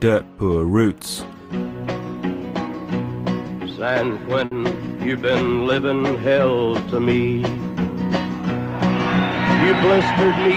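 At 4.45 s a burst of packet loss leaves a 60 ms gap, filled by extending the last sound and fading it, before playback resumes with that stretch missing.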